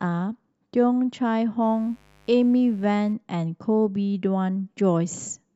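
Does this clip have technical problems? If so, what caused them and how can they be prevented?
Yes. Mains buzz enters the speech from 1.63 to 3.13 s: a steady, raspy buzz built on 50 Hz, with switching spikes twice per mains cycle spreading harmonics into several kHz, sitting quietly about 35 dB below the signal. Shielded, properly grounded cabling away from dimmers and rectifiers prevents it.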